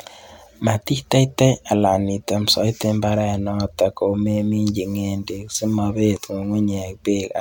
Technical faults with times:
none

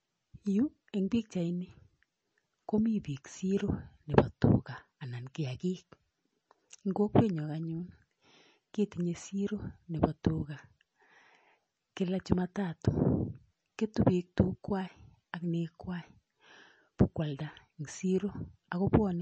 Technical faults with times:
0.00-19.21 MP3 compression

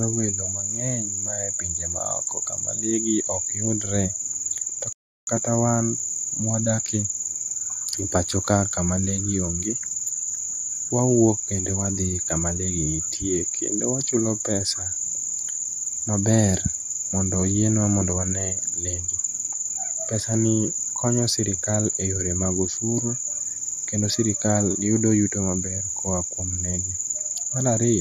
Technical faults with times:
4.93-5.27 rebuffering stall

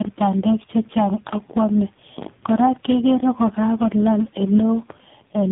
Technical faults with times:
0.00-5.52 tandem speech coding

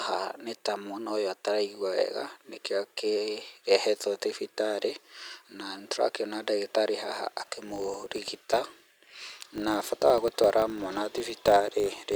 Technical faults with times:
7.40-12.15 filter restarted on every block

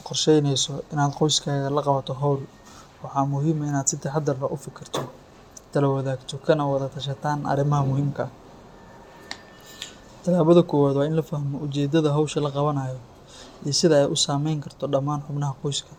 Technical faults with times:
none

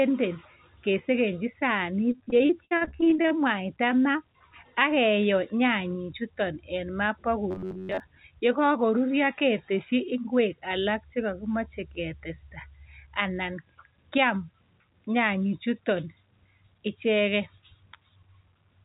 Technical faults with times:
2.12-3.32 repeated packet loss (robotic sound)
7.51-8.00 robotic sound from repeated short buffers

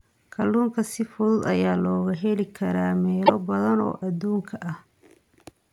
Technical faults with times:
3.23-3.30 damaged data in a compressed stream

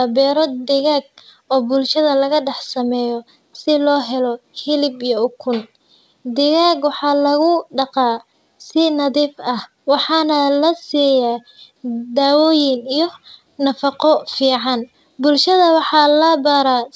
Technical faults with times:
none

